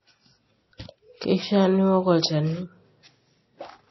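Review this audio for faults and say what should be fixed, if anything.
Throughout the speech, the audio was likely squeezed through MP3 compression at a low bitrate, consistent with roughly 24 kbps. Starved of bits, the encoder cut the treble, leaving nothing above about 5.8 kHz, and let weak frequency lines flicker between frames, giving a plainly watery, swirly texture and dulled s sounds. Prevent it by encoding at a higher bitrate or keeping the recording in a lossless format.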